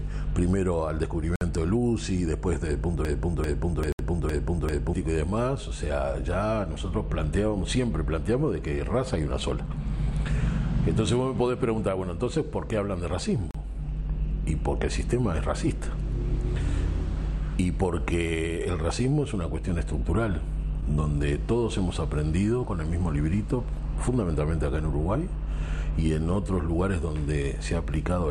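At 1.36 s the sound drops to silence for 54 ms, then resumes. This is a Bluetooth stall. It was likely caused by interference delaying packets until the headphones' buffer ran empty. Two more gaps follow, at 3.92 s for 67 ms and at 13.51 s for 36 ms.

From 3.05 s to 4.94 s a broken-record loop takes over. One 393 ms fragment plays five times, back to back. The stream likely stalled and kept resending its last piece. The audio meant for that stretch is gone.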